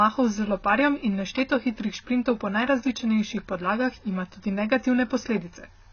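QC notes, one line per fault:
Throughout: AAC compression, likely from a low-bitrate AAC-LC encode around 16 kbps. Nothing survives above 6.5 kHz, so the speech sounds dull, and coarse quantisation of the remaining frequency lines leaves heavy damage: smeared, warbling sibilants and a fizzy texture on sustained sounds.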